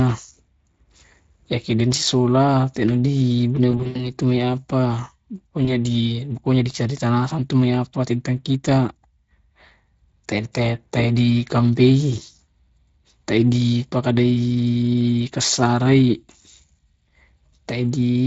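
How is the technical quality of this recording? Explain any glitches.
The recording has audible faults. Codec coloration runs through the whole clip, and there are two short dropouts.

Speex codec, throughout: The speech sounds hoarse and noisy. Speex is a CELP coder. At this setting it has too few bits for the excitation signal, so the speech loses clarity and gains a rough, grainy texture. The damage fits a bitrate of around 20 kbps.

VoIP packet loss concealed by the speech codec, 3.71 to 4.10 s and 5.65 to 5.72 s: The first gap falls after "tena di buna" and before "tu mai apa". There, about 140 ms is missing, scattered over 240 ms, with the longest run lasting 80 ms. The second gap falls after "tu mai apa" and before "di pokonya", where 20 ms drops out. In each case the decoder repeats its last pitch and filter at falling gain. The sound smears and fades, and the speech stays weak just after each gap.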